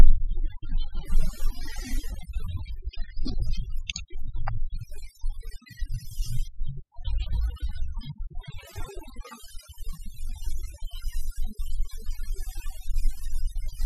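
From the very start and all the way through, you can hear overdone noise removal. The noise reducer was pushed way too hard, so any frequency band sitting close to its idea of the noise gets pulled right down or switched off, and the softer bits of speech get thrown out along with the noise. Between phrases the background drops away, with little twinkling specks left behind.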